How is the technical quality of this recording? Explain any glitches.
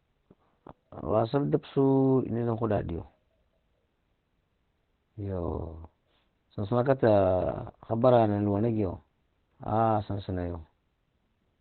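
The technical quality is poor. Opus compression is the likely cause, and it affects the whole clip. Nothing is heard above about 4.2 kHz, so the speech sounds narrowband and muffled, like an old telephone line. The codec appears to be in its speech (SILK) mode at a very low rate, near 12 kbps. At that rate it cuts the treble and models the voice coarsely. The result is hoarse, dull and heavily degraded throughout.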